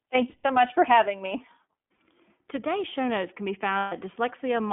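The whole speech clip has passed through the iLBC codec. The band runs from about 200 Hz to 3.4 kHz, so there is no air or sibilant brightness, and the coding damage is plainly audible as a rough, slightly synthetic edge on the voice. The codec models each short frame's excitation on its own, and the grain fits 20 ms frames at iLBC's 15.2 kbps mode.

Lost iLBC frames occur at 0.30 to 0.44 s (140 ms), 1.94 to 1.98 s (40 ms) and 3.78 to 3.93 s (140 ms). At each gap the decoder repeats the last pitch cycle blended with noise, so the missing stretch is replaced by a held, faintly buzzy vowel-like tone. On the two 140 ms losses it fades as it goes. Because each frame decodes independently, the voice comes back clean almost immediately after each gap.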